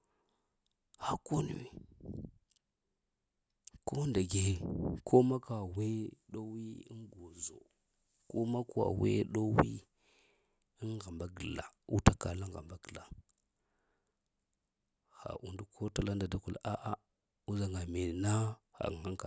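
Speech recording, and nothing is technically wrong with it.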